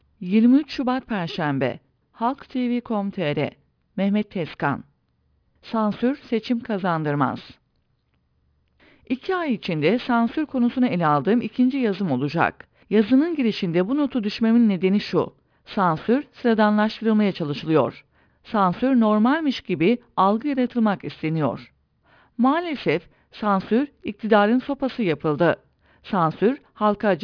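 Aliasing runs through the whole speech clip. The audio appears to have been resampled from 44.1 kHz down to about 11 kHz with no anti-alias filter, so content above the 5.5 kHz folding point reflects back into the band as unrelated tones, roughly 25 dB below the speech. Sibilants sound gritty and metallic, and energy is packed right up to 5.5 kHz. Simple band-limiting would sound dull with a soft roll-off instead.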